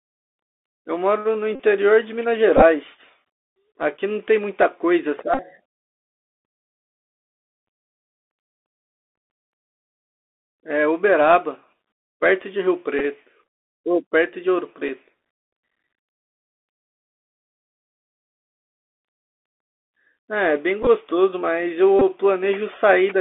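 Bluetooth CVSD headset codec runs throughout: the audio is held to roughly 250 Hz to 3.5 kHz, with scratchy sibilants and granular hiss, which fits one-bit 64 kbps delta coding. Bluetooth headset packet repeated at 1.55–1.60, 2.57–2.63, 5.34–5.40, 12.99–13.01, 14.88, 20.83–20.87 and 21.99–22.01 s: lost packets were replaced by their predecessor's bits, giving brief buzzy ticks.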